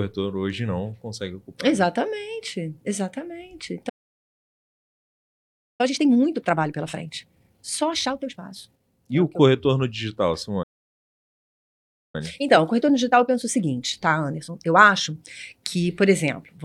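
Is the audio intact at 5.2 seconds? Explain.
No. At 5.2 s the audio is inside a playback stall running from 3.89 to 5.81 s, where the speech halts mid-flow for about 1.9 s, likely because the player ran out of data. The waveform shows a flat line and the spectrogram a blank gap.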